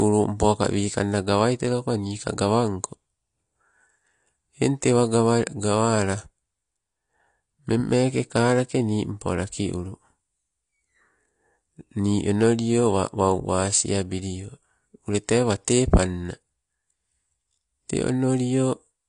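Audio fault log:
throughout: AAC compression. The speech sounds dull and smeared, with a plainly audible warbling, fizzy texture on sustained vowels and sibilants. Nothing remains above 10.2 kHz, which a spectrogram shows as a hard, flat ceiling, with patchy holes and blurred, flickering blocks in the upper bands beneath it. The likely cause is AAC-LC coding at a bitrate around 32 kbps, too few bits to fill those bands, so the encoder lowers its cut-off and leaves gaps.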